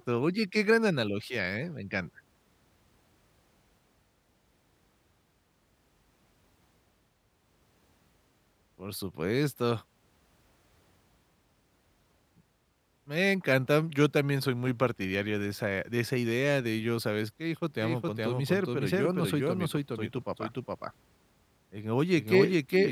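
From 17.8 s to the end, the speech carries a doubled audio track: a second, full-band copy trails roughly 0.4 s behind at about equal level, likely from a slower capture path. It enters abruptly, and the spectrogram shows every pattern repeated, offset sideways, without decay.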